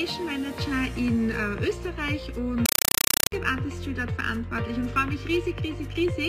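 From 2.66 to 3.32 s, loud chattering static bursts 31 times a second: a compressed stream played as audio, an AC-3 bitstream, likely near 256 kbps, output undecoded as samples.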